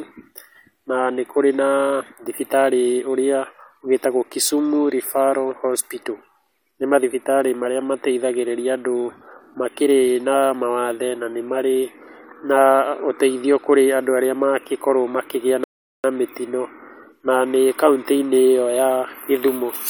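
A rebuffering stall runs from 15.64 to 16.04 s: the player exhausted its downloaded audio and halted until more data arrived. The speech drops to silence for 400 ms, then resumes exactly where it stopped, losing nothing but stretching the timeline.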